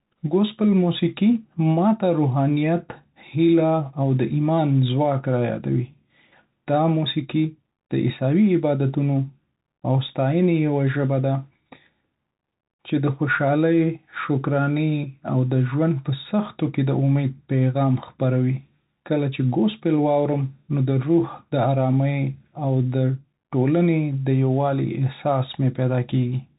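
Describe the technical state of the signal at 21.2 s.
At 21.2 s, as throughout the clip, the speech passes through a Bluetooth CVSD headset codec. Its one-bit adaptive delta coding removes everything above 3.8 kHz, leaving plainly audible scratchy sibilants and granular hiss.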